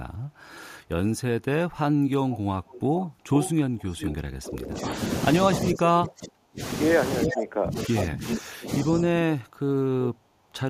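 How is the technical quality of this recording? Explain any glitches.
The recording has two recurring call-processing faults, both likely from a speakerphone echo canceller. An echo leak is audible from 2.3 to 4.16 s as a discrete copy about 10 dB down, 432 ms late. It returns from 7.21 to 7.41 s and 7.78 to 8.38 s, 385 ms late and about 5 dB down. Unlike room reverb, it repeats the sound as a separate copy rather than a smear. Speech suppressed in double talk appears from 4.24 to 4.95 s, 5.4 to 6.61 s and 7.26 to 9.09 s. The level falls by roughly 30 to 35 dB while the other side talks. Unlike a packet dropout, these are gated dips that follow the overlap.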